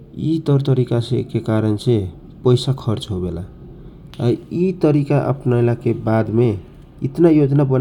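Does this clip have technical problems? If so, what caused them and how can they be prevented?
No, no technical faults found.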